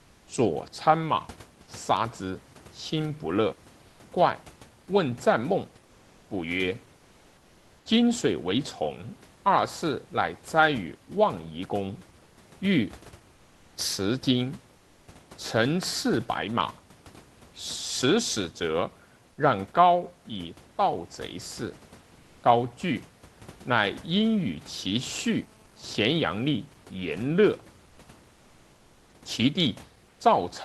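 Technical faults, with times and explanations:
3.89–3.99 s, 12.23–12.37 s, 14.77–15.07 s, 27.89–27.97 s and 30.09–30.19 s, comfort noise in place of the background: for 80 to 300 ms, the room noise becomes flat, featureless hiss about 1 to 3 dB quieter. Likely Opus DTX filling the pauses.
25.11–26.52 s, GSM phone buzz: a steady, raspy 217 Hz buzz with many harmonics, about 32 dB below the sound. A nearby phone in a call sends radio bursts that the audio circuit rectifies.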